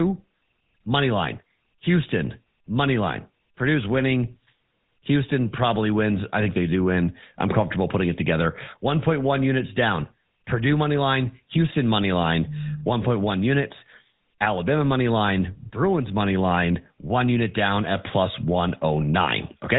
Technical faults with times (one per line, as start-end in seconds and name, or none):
0.00-19.79 GSM full-rate codec